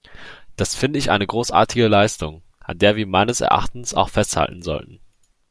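No faults are audible anywhere in the speech.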